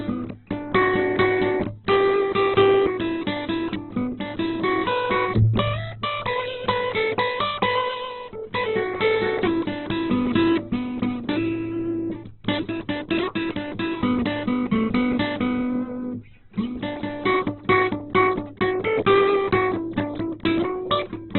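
Heavy Opus compression throughout the music is the likely cause: the encoder is starved of bits, fitting a rate near 8 kbps, and narrows to narrowband with nothing above 4.3 kHz. Tones sound muffled, rough and grainy, with noisy fill replacing detail.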